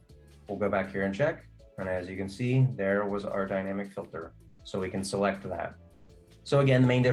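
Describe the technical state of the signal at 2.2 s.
At 2.2 s the signal is intact, with no audible technical fault at that moment.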